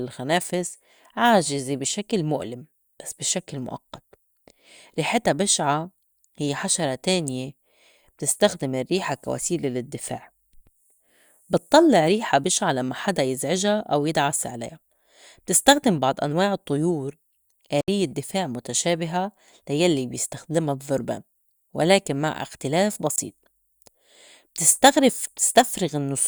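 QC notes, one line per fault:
17.81–17.88 s: block of digital silence. The speech drops to silence for about 72 ms and returns with no fade, so the gap reads as a short hole, consistent with an output buffer not being filled in time.
23.16–23.18 s: block of digital silence. A 20 ms run of silence with hard edges at each end. It is just long enough to register as a brief hole rather than a tick.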